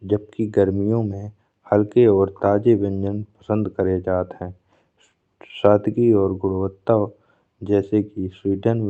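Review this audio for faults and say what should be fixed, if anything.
No faults turn up in this audio, so nothing needs to be fixed.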